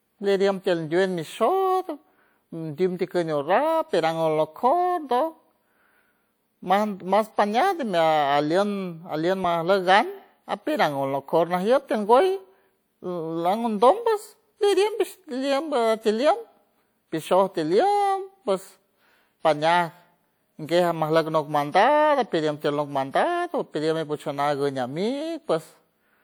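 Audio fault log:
19.43 s, audio missing between chunks: the speech skips forward at this point, with a very short piece, around 10 ms, gone and the sound on either side joined directly with no gap of silence. The likely cause is a recorder or processor handling the audio in 10 s chunks and dropping a sliver while it closes one chunk and opens the next, so the join lands as a small jump in the speech.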